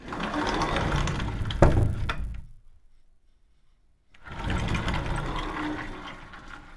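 Right through the clip there's a steady buzz riding on the sound, and it's a resampler restarted on every block. The 48 kHz to 24 kHz conversion was done in 10 ms chunks, each handled as if it stood alone, so every chunk edge picked up a small error where the filter couldn't see its real neighbours. At 100 edges a second, those ticks merge into a 100 Hz buzz that follows the signal and drops away whenever things go quiet.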